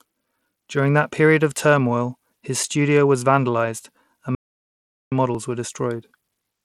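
A Bluetooth link using SBC compression at a small bit pool is the likely source of the damage that runs through the whole speech clip. SBC splits the signal into a handful of wide sub-bands and hands out bits without any model of hearing, so the upper bands are starved and everything else is coarsely quantised. The treble is thin and unsteady, with a gritty haze and aliasing on the voice, which fits a rate of around 96 kbps.

At 4.35 s, right after "studio was vandalized and", the player most likely ran dry or its thread was held up, and a playback stall follows. Output goes completely silent for about 0.77 s, until 5.12 s, when the sound resumes with "models were". The speech breaks off mid-phrase and the gap is clean silence rather than noise or a repeat, so the line sounds frozen before it picks up again.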